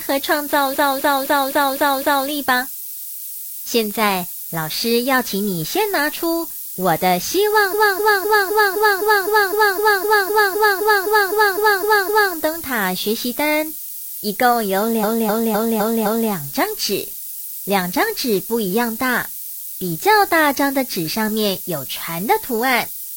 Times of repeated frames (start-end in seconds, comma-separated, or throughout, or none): 0.70-2.25, 7.70-12.31, 15.00-16.29